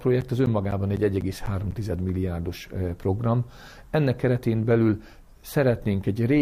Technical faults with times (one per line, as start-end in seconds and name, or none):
0.21-1.72 periodic USB or driver dropouts